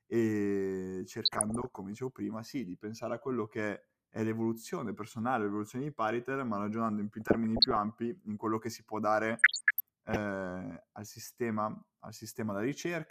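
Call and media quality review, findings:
DAB burbling, 1.14–1.78 s (before "dicevo prima sì di"), 7.21–7.77 s (between "ma ragionando in più" and "ampi in quello che"), 9.37–10.17 s (after "quello che si può"). Short noise blips in single sub-bands in the speech. Probable component: DAB receiver. Bit errors slip past error correction into the MP2 data, corrupting sub-band samples across many consecutive frames, which suggests a bit error rate around 0.3 to 0.5 percent.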